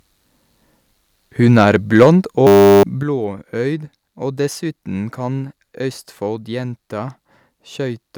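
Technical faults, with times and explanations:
1.49–1.63 s and 1.96–2.09 s, microphone overload: The loudest peaks are flattened at the top, about 1 dB over the limit in the first burst and about 5 dB in the second. A small share of samples is cut, then a larger one. This gives a harsh, crackling edge. The likely cause is input volume set too high for the converter.
2.03 s and 3.03 s, microphone volume stepped down: The level drops suddenly, by about 3 dB and then about 8 dB. Sound and background fall together. The first drop lands inside the distorted peak. This is likely software cutting the device's input volume after hearing clipping.
2.47–2.83 s, system hang loop: A 10 ms slice repeats dozens of times. This makes a steady 100 Hz buzz in place of real audio. About 0.4 s of sound is lost. The system froze while the hardware kept replaying its ring buffer.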